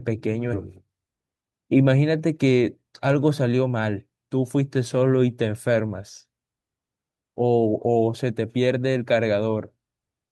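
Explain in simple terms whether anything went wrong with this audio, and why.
A skip ahead happened: the system threw away roughly 0.4 s of speech, so at 0.53 to 0.55 s the audio jumps forward without a pause.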